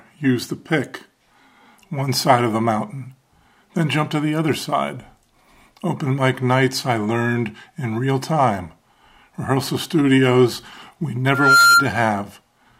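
From 11.28 to 11.88 s a loudspeaker feedback squeal rises at 1.4 kHz. A microphone is re-capturing its own speaker output, and the loop gain at that frequency exceeds one. The tone swells over roughly a third of a second to about 10 dB above the sound. On a spectrogram it appears as a single bright horizontal line at 1.4 kHz, and the waveform envelope balloons.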